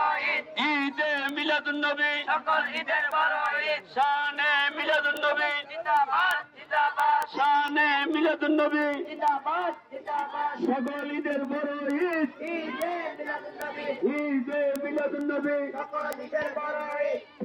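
The sound carries word clock ticks from 0.15 s to 17.38 s: sharp clicks recurring about every tenth of a second, roughly 150 in all. Each one is a single sample dropped or repeated where a receiving device on its own free-running clock slips against the sender's digital feed. A drift of roughly 200 ppm explains the rate. A spectrogram shows evenly spaced thin vertical broadband lines. The waveform shows tiny one-sample steps or spikes at matching intervals.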